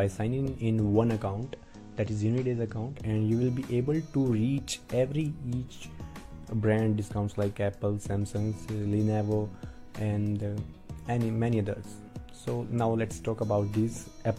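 A hybrid receiver lost its digital signal and fell back to the FM broadcast from 1.25 to 3.06 s, which is digital radio blending to analogue. Over a 186 ms cross-fade, the audio drops about 2 dB and picks up faint hiss well below the signal.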